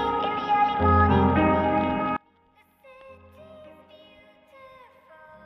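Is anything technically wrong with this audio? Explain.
Yes. One channel inverted, likely, from 2.17 s to the end at 5.45 s: with one side's polarity flipped, the content shared by both channels cancels when summed to mono. Level drops by about 32 dB, leaving only a faint residue of the difference between channels.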